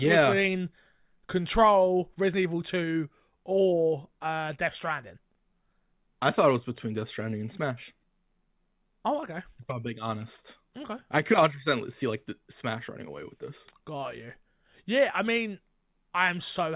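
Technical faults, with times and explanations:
No technical faults detected.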